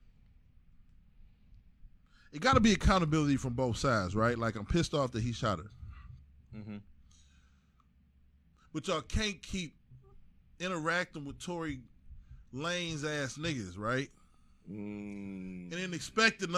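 Listening to the recording, nothing stood out as a technical problem at any point.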